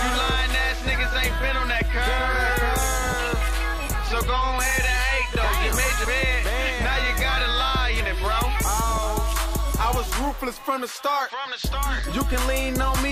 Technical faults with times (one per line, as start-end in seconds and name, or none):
3.90-3.94 compressed frames skipped
7.99 compressed frames skipped